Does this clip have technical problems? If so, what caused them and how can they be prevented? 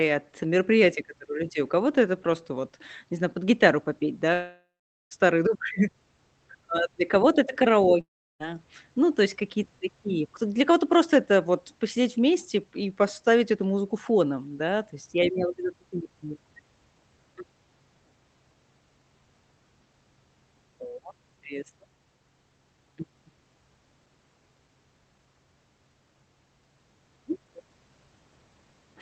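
Yes. At 4.33–5.13 s, right after "знаю под гитару попеть", and at 8.01–8.42 s, a long network dropout, likely from lost packets, smears the last sound into a fading buzz, then silence. A spectrogram shows blurred streaks decaying into a blank band, and the waveform goes flat. A stable, uncongested connection prevents this.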